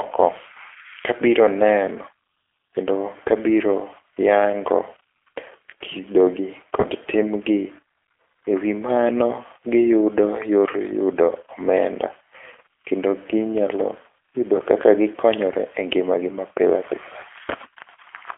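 Throughout, the G.729 codec is plainly audible. The sound sits in a telephone band of about 300 Hz to 3.4 kHz, and on top of that narrowing it has a rough, synthetic grain. That grain is what separates it from simple band-limiting: the speech is rebuilt from a filter, a pitch model and sparse pulses, which fits an 8 kbit/s coder.

At 6.80 to 6.85 s and again at 14.56 to 14.62 s, VoIP packet loss concealed by the speech codec is heard. Each event fits one lost 20 ms packet. Unlike a dropout, there is no silent gap. The decoder stretches the last sound into a fading buzzy tone or coloured noise, and the voice stays weak or distorted for tens of milliseconds after each event.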